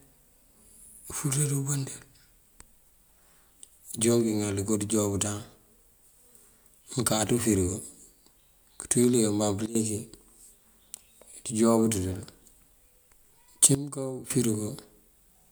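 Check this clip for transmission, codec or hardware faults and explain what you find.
Two sudden gain jumps here. Right after "kënţú yul dí kabaŋ", from 9.66 to 9.75 s, and again from 13.75 to 14.30 s, the level drops by about 15 dB and about 14 dB, speech and background together. Likely an unramped digital gain change between samples.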